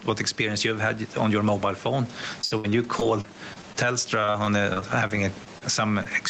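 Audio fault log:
throughout: gain pumping. The level swings by about 10 dB. That's likely the input gain set far too hot and a fast limiter clamping down on every peak, so everything sounds squashed.
2.41–3.77 s and 4.21–5.63 s: repeated packet loss (robotic sound). Right after "on your mobile phone" the audio turns choppy. The first run has nine holes, the longest 68 ms. The second has ten, the longest 38 ms. Each gap gets patched by stretching the last sound before the next one hits.
6.03–6.07 s: short concealed packet loss. About 20 ms of audio never arrived in time. The receiver bridged it by carrying the previous sound forward for a moment and then blending back in, which leaves a quick smear or wobble rather than a clean gap.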